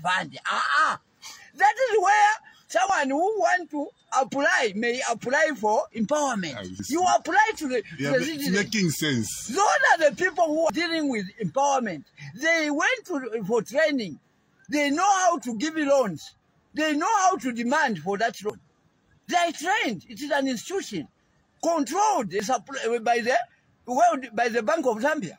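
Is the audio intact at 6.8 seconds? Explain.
No. At 6.8 s there is audio missing between chunks. About a tenth of a second skips, joined without silence, likely lost at a 4-second chunk boundary.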